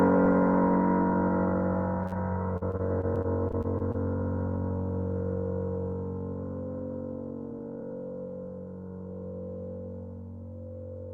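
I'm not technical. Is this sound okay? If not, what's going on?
No. At about 2.06 s there is a short stall from a late packet. A piece of the audio arrived late, so the receiver had nothing ready to play and stretched the last bit of sound to cover the wait. It then carried on from where it left off, so nothing is lost, but for roughly 50 milliseconds, up to about 2.14 s, the sound hangs and may buzz or dip slightly.

Soon after, from about 2.57 s to 3.96 s, there is repeated packet loss, which gives a robotic sound. Over that 1.4 seconds, pieces of the audio kept going missing or arriving too late. Each hole was patched by stretching the sound just before it, the longest patch lasting about 40 milliseconds, and then the next hole came along. About a sixth of that stretch is patched-over sound, and a few fractions of a second are simply gone, so it comes out choppy.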